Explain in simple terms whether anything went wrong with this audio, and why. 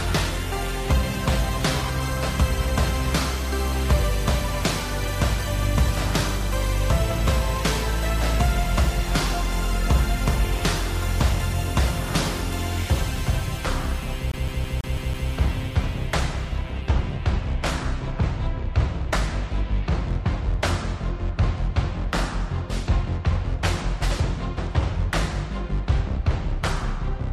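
Adaptive stream starting at a low bitrate, from 0.0 to 2.0 s: to start quickly, the player began on a low-quality version of the stream. The treble sounds thin and artificial until it measures the connection and jumps cleanly to a better version.

CD stuck on one turn, from 14.32 to 15.30 s: a scratch keeps throwing the laser back, so the same 0.16 s snippet plays six times, each with a tiny dropout at the jump. The result is the quick, even stutter of a skipping CD.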